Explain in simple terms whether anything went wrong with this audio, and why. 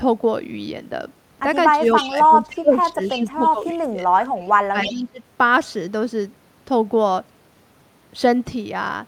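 The speech keeps dipping and going muffled at 1.76 to 1.81, 2.07 to 2.99, 3.16 to 4.3 and 4.72 to 5.21 s, likely speech suppressed in double talk, where both sides talked at once.

There's also a repeat of the speech about 314 ms late at 1.84 to 2.2, 3.04 to 3.65 and 4.82 to 4.94 s, likely echo leak from a loudspeaker.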